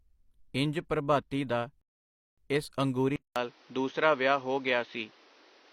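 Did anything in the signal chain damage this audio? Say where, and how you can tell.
Yes. After "ਇੰਜ ਪ੍ਰਭਾਤੀ ਦਾ" the speech drops to silence from 1.81 to 2.38 s, then resumes exactly where it stopped. This is a rebuffering stall at playback: the player ran dry and waited, adding 0.56 s.

At 3.16 s, after "ਇੰਜ ਪ੍ਰਭਾਤੀ ਦਾ ਇਸ", a 200 ms gap leads into duller speech with nothing above 6.5 kHz and new background noise roughly 30 dB down, at much the same level, to the end. The likely cause is the input switching to a poorer device at the driver stage.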